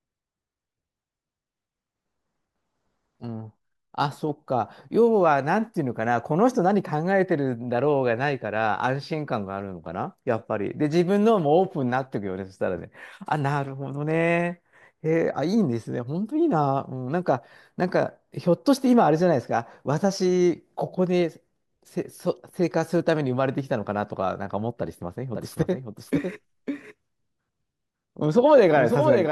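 From 25.35 s to the end of the clip, the speech is suddenly joined by a second copy of itself trailing about half a second behind and a few decibels quieter. It is just as bright and dry as the original, with no decay or room colour, so it sounds like a stutter or overlap rather than an echo. This is a doubled audio track, likely from the signal being captured a second time through a slower path.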